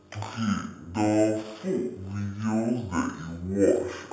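Speech, played throughout at half speed and an octave low: stereo read as mono, with interleaved left and right samples run as one channel. The spectrogram shows a fainter mirrored copy in the upper half.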